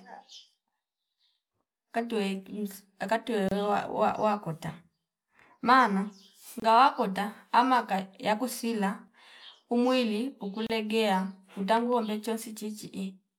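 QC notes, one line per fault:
3.49–3.51 s, 6.60–6.62 s, 10.67–10.70 s: gap at a join of encoded pieces. The speech was encoded in separate pieces and joined without trimming, so each join keeps the encoder's start-up silence and the padded final frame of the previous piece. This opens a brief dropout of about 29, 25 and 32 ms in continuous speech, with edges smeared by the codec, before the sound resumes exactly where it stopped.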